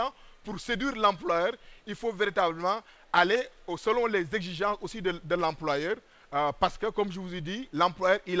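Nothing is technically wrong with this audio, which came through a WebRTC call path using G.722 at 64 kbps and so carries nothing above 8 kHz.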